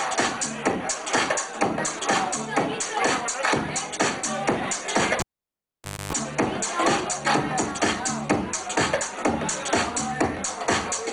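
A live cable was pulled and plugged in again between 5.2 and 6.13 s. The sound opens with a pop, drops to near silence for about 884 ms, including a 267 ms burst of 50 Hz mains buzz as only the tip connects, before a second pop restores the audio.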